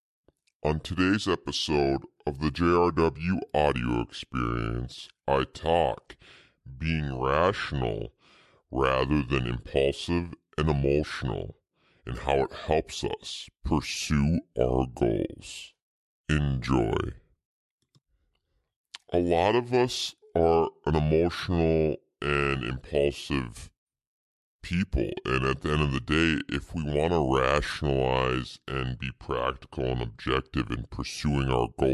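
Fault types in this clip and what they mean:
wrong sample rate: playback runs at a lower rate than capture with no conversion, which fits 44.1 kHz material played at 32 kHz. Throughout, the speech moves at 0.726 times normal speed and sits 5.55 semitones lower, sounding slow, deep and dragged.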